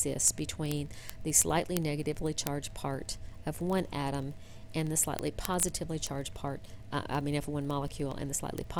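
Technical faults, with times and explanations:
0.10 to 8.79 s, word clock ticks: roughly every 30 ms, some three hundred ticks in all, the sound carries a sharp click of uneven strength. The receiving device is running on its own clock, not locked to the sender's digital link, and the two drift apart by something on the order of 700 ppm. Each time they slip past each other, a few samples are misread and a single sample is dropped or repeated, producing the steady ticking.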